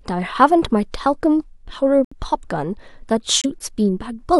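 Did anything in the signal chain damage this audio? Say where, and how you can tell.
Yes. At the codec decoding stage, corrupt frames were muted: compressed frames arrived with flipped bits, the decoder rejected them, and the player substituted silence. The sound cuts to dead silence abruptly from 2.05 to 2.13 s, a gap of about 88 ms that points to several consecutive frames being dropped, and again from 3.42 to 3.46 s, about 40 ms, consistent with a single lost frame. Timing around both holes stays intact.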